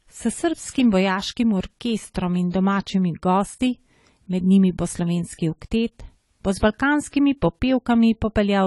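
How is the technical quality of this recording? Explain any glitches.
The recording has two clear technical problems: plainly audible codec damage throughout and one sharp click early on. From start to finish, the speech sounds dull and smeared, with a fizzy, warbling edge on sibilants. That is likely AAC compression at a low bitrate, consistent with around 32 kbps, where a lowered cut-off and coarse quantisation strip detail. At 2.39 s, a sharp snap sits on top of the speech just before "in domačimi gosti". This is likely an electrical switching spike, a brief arc from a nearby switch or discharge picked up by the audio line.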